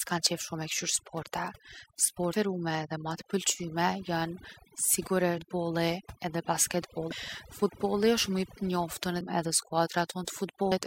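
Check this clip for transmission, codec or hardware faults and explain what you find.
Two faults are present: heavy-handed noise reduction across the whole speech clip, and five short bursts of damaged data in the compressed stream.

Overdone noise removal runs from start to finish. The reduction was set too aggressively, so individual frequency bands sitting near the noise estimate are pulled right down, taking the quieter parts of the voice with them. The background drops away and breaks up into twinkling specks.

Damaged data in a compressed stream occurs at 2.32 s, just before "edhe ma", then at 5.37 s, 7.11 s, 9.20 s and 10.71 to 10.73 s. Corrupted bytes make the decoder misread frames, lose sync and hunt for the next header. Each event is a brief chirp or blip.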